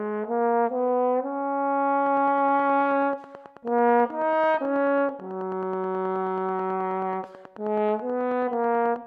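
From 2.07 to 8.97 s a train of clicks, likely from interference, ticks evenly at 9.3 per second near signal level, appearing as spaced vertical spectrogram lines.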